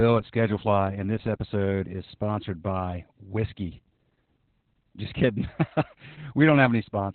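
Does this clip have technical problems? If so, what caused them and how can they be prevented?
Yes. Opus voice compression runs throughout: the SILK coder squeezes speech into a 4 kHz band with coarse excitation, leaving it muffled, hoarse and robotic, consistent with about 8 kbps. Encoding at a higher bitrate, such as 24 kbps or more, keeps wideband audio and cleaner excitation.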